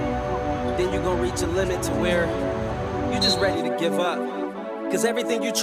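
No technical faults turn up anywhere in the recording.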